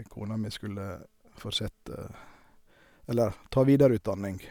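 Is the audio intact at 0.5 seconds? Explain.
Yes, at 0.5 seconds the speech plays through intact, with no fault audible at that moment.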